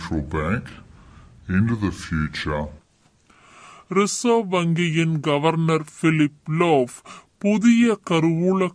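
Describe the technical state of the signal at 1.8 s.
Wrong sample rate at 1.8 s, as throughout the clip: playback runs at about 0.69 times speed, consistent with 32 kHz audio played at 22 kHz, dropping pitch roughly 6.5 semitones, slow and low.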